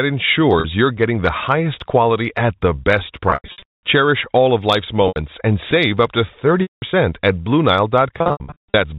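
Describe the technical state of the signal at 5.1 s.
At 5.08 to 5.16 s there is packet loss with pitch repetition: about 80 ms went missing, which fits four 20 ms packets. The receiver loops the last pitch period into a brief buzzy hold that fades toward silence before speech cross-fades back, unlike a plain dropout's abrupt hole.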